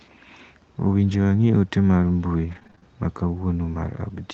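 From 2.51 to 2.84 s the speech breaks up from repeated packet loss, giving a robotic sound. Packets went missing again and again in this short stretch. About half a dozen small holes appear, the longest near 30 ms. Each is patched by stretching the sound just before it, so roughly 38% of the span is filler. The result is choppy, with slivers missing. The call codec's band tops out near 8 kHz throughout.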